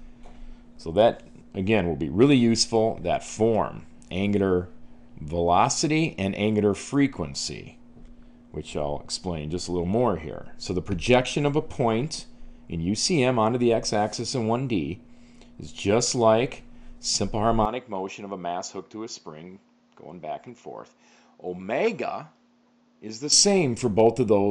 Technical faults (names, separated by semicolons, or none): input switched to a poorer device